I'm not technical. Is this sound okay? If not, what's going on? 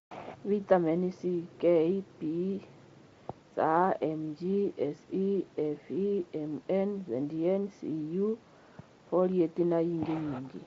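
Yes, this sound is okay: nothing is going wrong in it.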